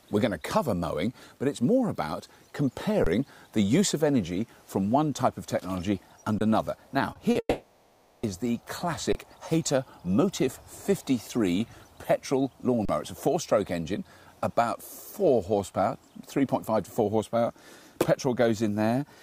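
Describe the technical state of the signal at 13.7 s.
At 13.7 s the signal is intact, with no audible dropout, distortion, glitch or other technical fault.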